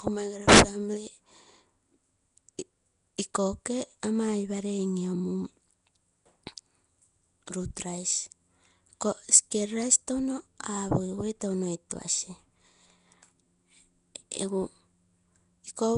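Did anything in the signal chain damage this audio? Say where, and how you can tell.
Yes. Nellymoser compression is audible throughout, at the codec stage. The speech carries a rough, hissy halo and a smeared, underwater quality, and nothing is present above 10.6 kHz. The likely cause is Nellymoser Asao at a rate that points to roughly 44 kbps. Its fixed allocation starves weak bands, which are then filled with noise.

Pre-echo is at 11.90 s, also from the codec. A brief hiss about 11 ms long runs ahead of a sharp attack, which itself sounds softened. The attack sat late in a transform block, so quantisation noise sized for the loud onset spread backwards into the quiet gap before it.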